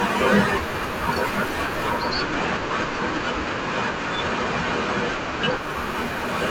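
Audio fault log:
1.88–5.78 s, digital radio blending to analogue. A 265 ms cross-fade drops to FM. Faint hiss sits far below the speech. Level holds.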